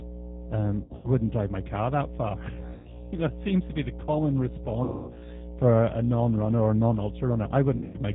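A ground loop or nearby transformer has coupled the power line in, leaving a steady 60 Hz mains hum about as loud as the speech throughout. The G.729 codec rebuilds the speech at 8 kbit/s with nothing above 4 kHz, so it sounds plainly rough and synthetic. VoIP packet loss concealed by the speech codec appears at 0.84–1.10 s before "drive my car that", at 2.74–3.08 s between "my car that far" and "you know it seems", at 4.84–5.28 s between "to be the common" and "for a", and at 7.76–7.98 s. Each time the decoder stretches the last sound into a fading buzzy tone or coloured noise, and the audio stays weak or distorted for a moment after.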